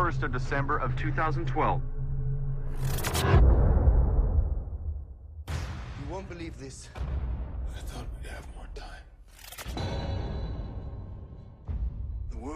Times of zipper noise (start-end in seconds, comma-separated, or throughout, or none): 4.30-5.76